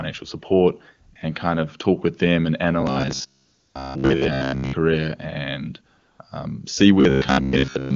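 At 1.13 s, just before "and kind of talk", AMR comfort noise briefly replaces the signal: the sender treated the moment as silence and stopped sending speech frames, and the receiver filled the gap with a smooth synthetic hiss. It returns from 3.45 to 3.75 s and from 5.97 to 6.19 s.

From 2.81 to 4.73 s, after "talk with them and", the audio becomes a rigid metallic buzz at 66.7 Hz. This is likely robotic sound from repeated short buffers: a 15 ms chunk repeats while most of the real audio is skipped. The same buzz reappears from 7.01 to 7.95 s, after "and um see".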